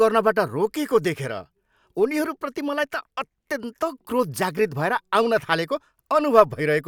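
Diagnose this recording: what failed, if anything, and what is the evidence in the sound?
Nothing in this speech recording points to a failure at any stage of the chain. There is no audible evidence to trace back to wiring, conversion, processing, transmission, storage or playback.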